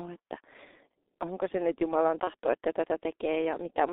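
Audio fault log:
Throughout: G.723.1 codec. Heavy low-rate coding confines the speech to about 300 Hz to 3.6 kHz. The slowly updated voice model leaves it muffled and hoarse, with smeared consonants, which fits a 6.3 kbit/s setting.
2.24–2.30 s: VoIP packet loss concealed by the speech codec. A 30 ms gap, which fits a single lost frame, is filled by extrapolating the last pitch and filter at falling gain, giving a brief, fading stretch.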